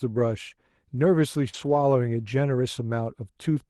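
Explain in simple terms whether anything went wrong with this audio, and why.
Around 1.49 s there is a short concealed packet loss: about 40 ms of the call never arrived in time, so the receiver bridged the hole by extending the preceding sound. This is heard as a brief smear or wobble lasting until about 1.55 s.

Overlapping that, from about 1.53 s to 1.83 s, the audio is a lost packet rebuilt from error correction, repeated over roughly 160 ms in total. The later packets carried rough backup copies of the missing ones, so nothing drops out, but that stretch sounds grainier and noisier than the audio around it.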